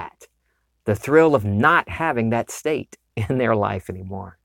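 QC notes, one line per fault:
No technical faults detected.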